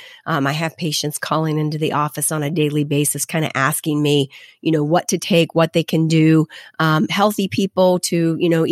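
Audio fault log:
0.21–8.69 s: clock slip clicks, faint regular ticks roughly every 0.1 s across the speech, likely from unsynchronised device clocks about 200 ppm apart, each slip dropping or repeating one sample.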